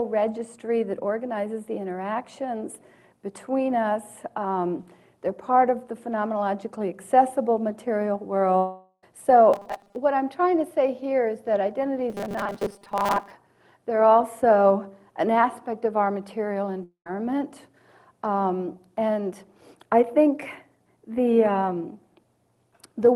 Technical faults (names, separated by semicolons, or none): long network dropout; robotic sound from repeated short buffers